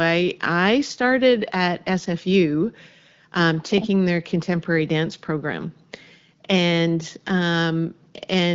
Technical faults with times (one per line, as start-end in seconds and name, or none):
none